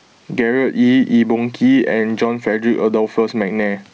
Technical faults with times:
0.00-3.93 gain pumping

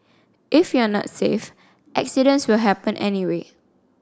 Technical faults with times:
none

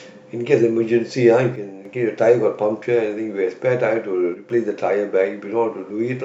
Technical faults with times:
1.56-1.85 one channel drops out
4.34-4.50 one channel drops out

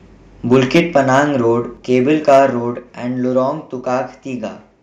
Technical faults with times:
0.52-1.20 microphone overload
0.78 microphone volume stepped down
1.77 microphone volume stepped down
2.28-2.39 microphone overload
2.79 microphone volume stepped down
3.81 microphone volume stepped down

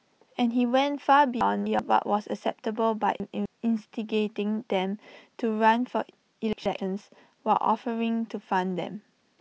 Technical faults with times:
1.41-1.79 chunks out of order
3.20-3.46 chunks out of order
6.53-6.78 chunks out of order

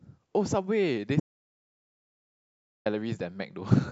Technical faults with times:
1.20-2.86 audio dropout to silence

